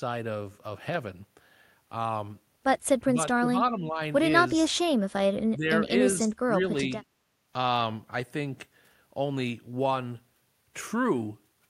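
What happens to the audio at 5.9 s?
An echo canceller likely misread a moment of double talk and clamped down on the near-end talker along with the echo. That is speech suppressed in double talk: from 5.85 to 5.93 s the speech dips by around 10 dB, a brief duck lasting well under a tenth of a second.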